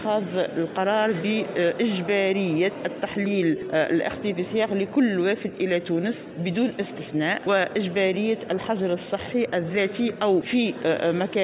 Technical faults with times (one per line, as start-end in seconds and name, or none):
none